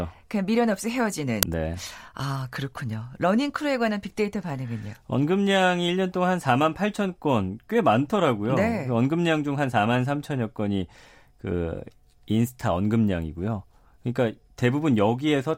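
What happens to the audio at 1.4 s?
At 1.43 s a very short, loud crack cuts across the speech, lasting only a few milliseconds. This is an uninitialised buffer: one audio block was sent to the output before any samples had been written into it, so whatever data was left in that memory was played as sound. The crack's length, about 2.7 ms, fits a single 128-sample block of garbage.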